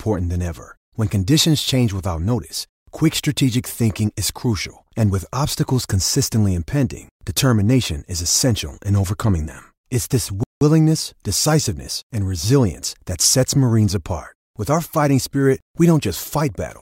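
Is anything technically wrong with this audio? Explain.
Yes. At 10.43 s the speech stops dead for 178 ms, then resumes at 10.61 s. This is a playback stall, likely the player running short of data or being briefly blocked.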